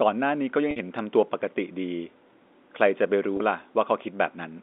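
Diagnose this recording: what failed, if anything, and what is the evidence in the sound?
Packet loss with pitch repetition, in the network path, at 0.71 to 0.76 s and again at 3.37 to 3.40 s. The first gap is 50 ms and the second 30 ms, which fits runs of 10 ms packets going missing. In each gap the receiver fills the hole by looping the last pitch period, so the sound briefly holds a slightly buzzy, frozen tone before normal signal resumes. The narrow G.711 telephone band, roughly 250 Hz to 3.6 kHz, carries through both events.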